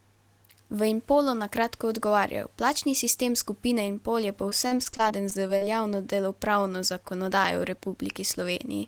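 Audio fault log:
4.49–5.63 s, repeated packet loss (robotic sound): packets kept going missing or arriving late, with about 11 gaps, the longest around 41 ms. Each hole was patched by extending the preceding sound, leaving roughly a fifth of the stretch synthesised, so the speech turns choppy with pieces missing.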